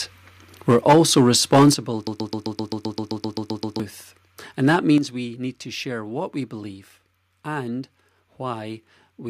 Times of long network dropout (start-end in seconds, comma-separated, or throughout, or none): none